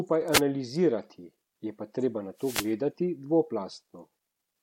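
Wireless microphone noise hits break into this speech recording twice, from 0.31 to 0.41 s and again for longer from 2.37 to 2.72 s, each a swish of static over the voice. An analogue FM radio link loses strength when reflected copies of the signal cancel at the receiver, so the receiver's own noise floor rises into the audio, and the second, longer dropout lasts about a third of a second. A corrupt frame decoded appears at 1.04 s as a brief, faint glitch, peaking very low at roughly -60 dBFS. Flipped bits inside the compressed stream led the decoder to play wrong gains or misread spectral codes, putting energy at frequencies that don't belong there, and the short duration points to a couple of damaged frames.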